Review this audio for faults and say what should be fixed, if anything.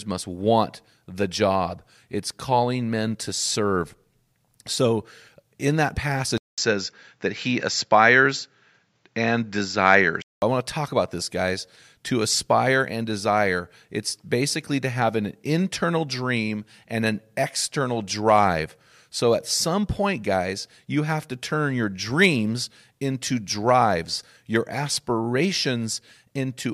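From 6.38 s, after "in that", a 200 ms gap precedes dull audio capped at 7.6 kHz with fresh faint noise until 10.42 s, before "I want to talk". This is likely an input switched to a poorer device; the gap and new noise floor distinguish it from simple filtering. Lock the recording input so the system cannot change devices mid-session.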